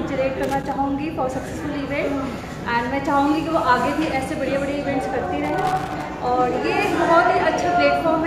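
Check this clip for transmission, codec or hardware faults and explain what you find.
Loose connector crackle appears twice, from 0.43 to 0.72 s and again from 5.10 to 6.04 s. A worn or dirty contact is making and breaking as it shifts, chopping the signal on and off, so each stretch comes through as an irregular burst of scratchy crackle.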